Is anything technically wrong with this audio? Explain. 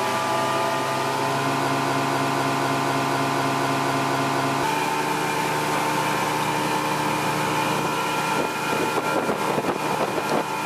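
Yes. From 1.68 to 4.63 s, a broken-record loop repeats one 0.25 s fragment exactly, twelve times back to back, likely because playback or streaming stalled and kept resending its last fragment. Unlike an echo, the repeats never decay, and the audio for that span is lost.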